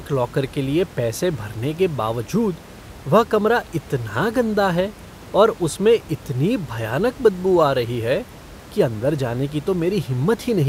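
No technical faults can be heard in this speech recording. A low level of room noise sits in the background, about 20 dB below the speech, as part of the space where the microphone was placed.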